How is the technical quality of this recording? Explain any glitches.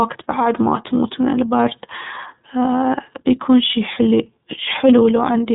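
The recording is narrowband speech with plainly audible iLBC codec damage throughout. Nothing above 4 kHz survives, so the speech sounds muffled and telephone-like. The codec rebuilds each 30 ms frame's excitation independently of the previous one, so the voice has a slightly rough, buzzy, synthetic texture. The frame length and level of damage fit iLBC's 13.33 kbps mode.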